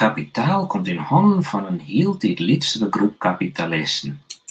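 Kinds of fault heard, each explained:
No kinds of fault are heard in this speech; the sound simply stops at about 8 kHz, as expected after passing through a call's microphone processing and Opus codec.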